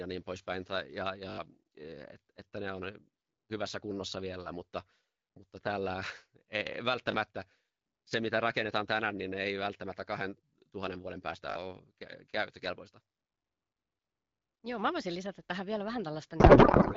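At 1.3–1.38 s, 7.12–7.14 s and 11.5–11.56 s, a repeated buffer produces brief stutters. The same 20 ms slice replays four, one and three times, which fits a 20 ms buffer starving, and roughly 70, 20 and 70 ms of audio is lost. From 16.39 s to the end, a codec payload misread of octet-aligned AMR parsed as bandwidth-efficient turns the AMR-WB speech into garbled noise and warble.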